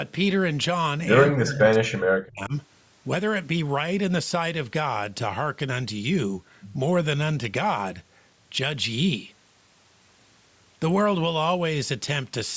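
From 1.31 s to 2.53 s, the speech is pushed down in level. The deepest drop is around 40 dB, and roughly a second of that span is affected. This is speech suppressed in double talk. The likely cause is an echo canceller that heard far-side sound on the loudspeaker while this side was talking. It could not tell the talker from the echo, so it turned both down. The band stops at 8 kHz, as expected from call microphone processing.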